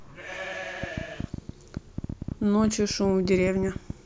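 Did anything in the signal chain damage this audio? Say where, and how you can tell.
Yes. From 0.84 s to 3.91 s, a train of clicks ticks over the speech and the pauses, about 10.8 per second at uneven spacing, around thirty similar pops peaking a few dB above the speech. This likely comes from interference pickup in analogue wiring or a faulty connection or power supply injecting pulses.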